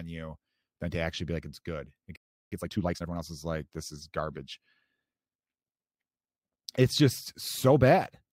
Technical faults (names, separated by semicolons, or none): playback stall; time-compressed catch-up